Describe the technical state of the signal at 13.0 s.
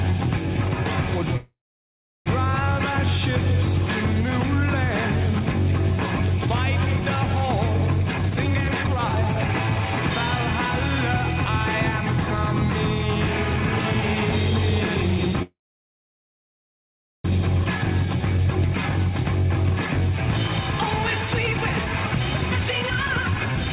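At 13.0 s the signal is intact, carried cleanly through the call path with its narrowband telephone character and nothing above 4 kHz.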